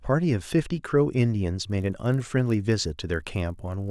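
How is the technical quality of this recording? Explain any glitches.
The technical quality drops partway through. From 1.66 s to 3.91 s there is a resampler restarted on every block. Each 20 ms block, converted from 48 kHz to 24 kHz, starts without its neighbours, so every edge carries a small error. That produces a 50 Hz buzz under the speech, shown as evenly spaced vertical lines in a spectrogram and as tiny steps in the waveform.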